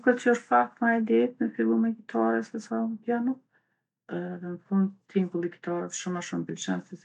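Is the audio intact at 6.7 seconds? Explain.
Yes, at 6.7 seconds the speech is intact, with no audible fault at that moment.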